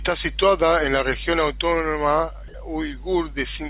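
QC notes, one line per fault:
2.48–2.54 s, sound dropped by the voice detector: for about 60 ms the speech gives way to a smooth, steady hiss, and roughly 40 ms of actual speech just isn't there before it picks back up. The likely cause is the sender's voice detector mistaking a soft stretch of speech for background and going quiet, so the far end filled the gap with comfort noise. That's why it sounds like a brief flat patch rather than a click or stutter, and the fill sits close to the room noise, which is about 42 dB under the speech anyway.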